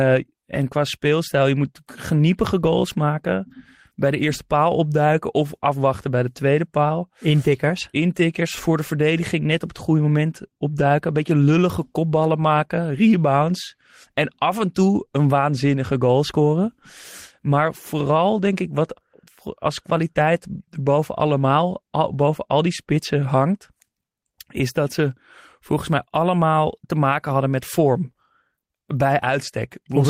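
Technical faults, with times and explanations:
No technical faults can be heard anywhere in the speech recording.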